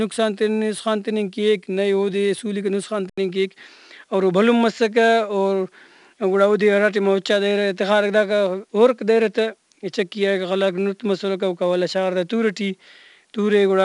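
From start to finish the speech carries 4-bit ADPCM compression, and it's plainly audible. Each sample is coded as a coarse 4-bit step from a predicted value, so the error rides along with the level: a gritty hiss clinging to every loud syllable, roughening sharp onsets where the step size lags. Nothing gets through above 10.6 kHz, which dulls the top end and fits a bitrate of about 88 kbps.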